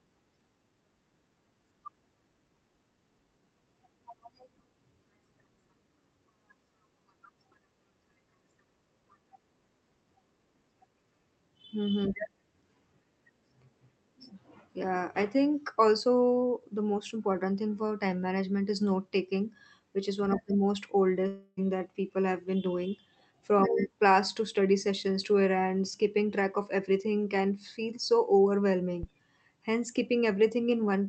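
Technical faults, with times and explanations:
21.27–21.59 s, long network dropout: packets likely stopped arriving after "the most", so the receiver stretched the last sound into a fading buzz, losing 0.3 s before "that people have been".
29.03–29.31 s, phantom power thump: a supply switching on a live input pushed a voltage step through the coupling capacitors, giving a deep thump that decays in 62 ms.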